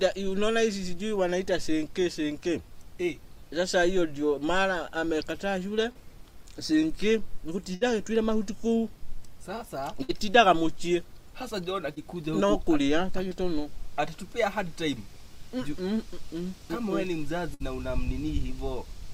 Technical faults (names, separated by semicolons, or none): short concealed packet loss; burst of packet loss